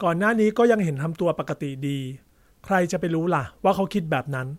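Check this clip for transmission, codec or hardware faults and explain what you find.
There is one hardware fault, a loud pop from 1.49 to 1.51 s. A single sharp pulse rises roughly 10 dB above the speech, which continues unbroken beneath it. The likely cause is a voltage spike from a plug, switch or static discharge.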